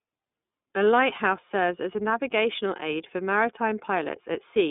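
Throughout the clip the speech passes through the iLBC codec, coding each 30 ms frame independently, which fits its 13.33 kbps mode. The band is held to roughly 200 Hz to 3.6 kHz, with nothing above 3.8 kHz, so the speech sounds muffled, rough and plainly synthetic.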